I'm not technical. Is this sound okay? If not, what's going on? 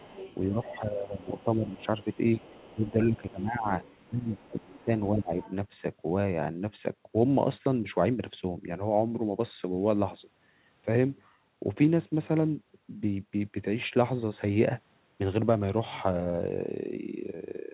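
No. Faint traces of the other side's voice leaking through appear at 0.0–0.39, 1.19–2.9, 3.83–5.1 and 5.42–5.54 seconds, likely from loudspeaker echo the call's echo canceller failed to remove. The main talker's speech is also suppressed in double talk between 0.5 and 3.67 seconds and again from 4.1 to 5.38 seconds: likely while both sides speak at once, the talker's voice dips. The second dip is deeper. The phone-quality sound, with nothing above 4 kHz, comes from the normal call path.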